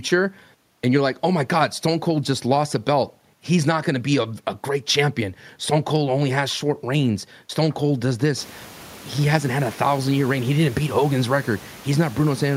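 There are no technical faults to describe in this speech; the room noise that grows louder about eight and a half seconds in belongs to the recording itself.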